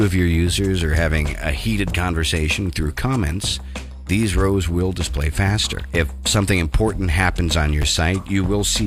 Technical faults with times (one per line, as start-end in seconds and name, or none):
7.82 chunks out of order